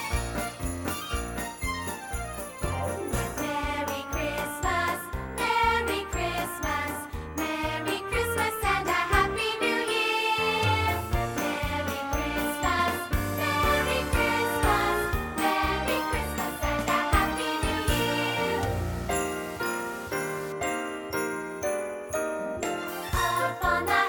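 From 17.36 to 20.52 s the sound turns grainy and gritty, likely low bit depth without dither, undithered rounding to about 6 bits, with distortion roughly 20 dB down.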